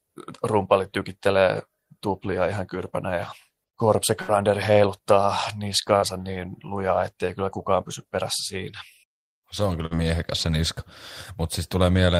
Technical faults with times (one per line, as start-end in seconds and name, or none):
4.21-4.31 burst of packet loss
5.96-6.05 burst of packet loss
9.86-9.96 burst of packet loss